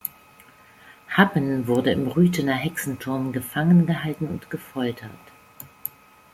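An electrical switching spike lands at 1.75 s: a single sharp snap laid over the speech, peaking at roughly -15 dBFS. It is over almost instantly, with no ringing or tail, and the speech carries on underneath unchanged. The likely cause is a nearby switch, motor or static discharge arcing briefly, with the audio line picking up that burst of interference.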